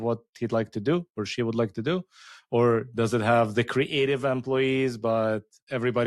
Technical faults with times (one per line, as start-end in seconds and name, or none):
none